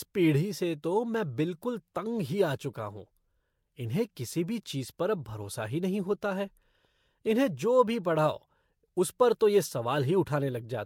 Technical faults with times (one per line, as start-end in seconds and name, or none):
none